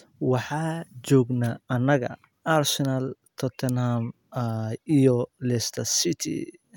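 No technical fault can be heard anywhere in the speech. There are no events to place in time or explain.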